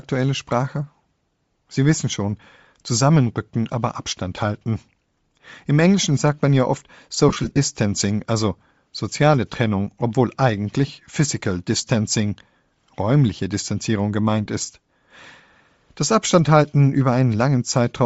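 Bluetooth LC3 compression runs throughout: the speech has a plainly audible breathy, grainy edge, likely from a low-bitrate LC3 stream, consistent with about 32 kbps, zeroing upper bands and noise-filling them.

Lost LE Audio frames occur from 7.29 to 7.58 s: about 158 ms is missing in short runs of up to roughly 30 ms, with the decoder filling the gaps by reusing the last spectrum with random signs.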